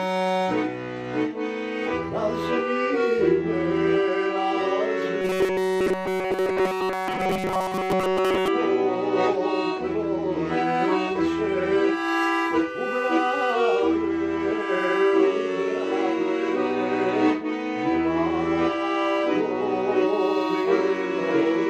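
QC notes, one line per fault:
5.22–8.48 s, robotic sound from repeated short buffers: a rigid metallic buzz at 188 Hz, likely from a 5.3 ms block replayed while nearly all real audio is skipped.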